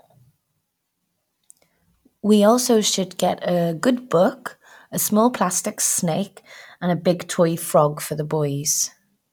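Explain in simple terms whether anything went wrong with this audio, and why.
Nothing went wrong here: the recording is technically sound, with no audible faults anywhere in it.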